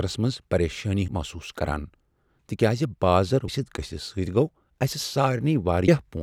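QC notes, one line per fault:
1.08 s, 3.48 s, 5.88 s: audio missing between chunks. About a tenth of a second of speech vanishes at each, with the two sides butted together, so the speech jumps abruptly. The first skip falls between "منٛز پریشانی" and "محسوس کران", the second just after "تکیاز بازر". The regular spacing points to a likely cause of audio being processed in 2.5 s chunks, with a short piece dropped at each handover.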